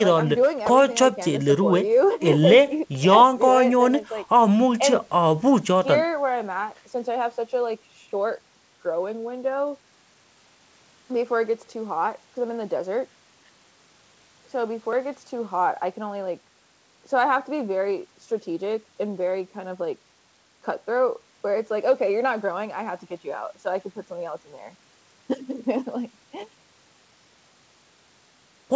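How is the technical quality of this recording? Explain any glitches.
No glitches turn up anywhere in this speech recording, which simply has the typical sound of a wideband call, with nothing above 8 kHz.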